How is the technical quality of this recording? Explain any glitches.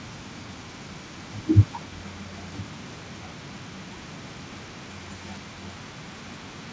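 A faint trailing copy of the speech runs through the whole recording, from start to finish, which is an echo leak. The repeat arrives about 0.24 s behind the original and sits very far below it, so it is heard as a quiet ghost of the speech rather than a distinct second voice. The likely cause is a far end playing the call on a loudspeaker whose echo canceller failed to strip out everything its microphone picked up, so the leftover was transmitted back. The audio is band-limited to 8 kHz, which fits the wideband call codec the recording passed through.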